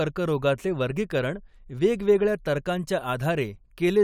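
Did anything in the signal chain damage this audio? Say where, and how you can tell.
No, nothing in the signal chain damaged this audio.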